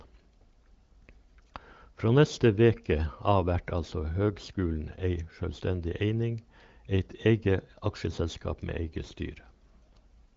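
Nothing in this speech recording sounds faulty.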